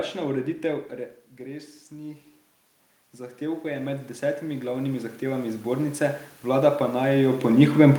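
From 3.16 s to 7.53 s the automatic gain rises: the input level drops by about 10 dB, and the gain control answers by slowly adding about 12 dB. The speech swells back up over several seconds, and the room noise swells with it. On the waveform the envelope climbs steadily across that stretch. On a spectrogram the pauses between syllables brighten as the noise floor lifts, unlike the talker movements near 0.5 s and 7 s.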